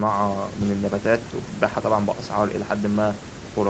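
No faults are present in this speech, which reaches only up to about 8 kHz after call microphone processing and a call codec path whose sound fits Opus.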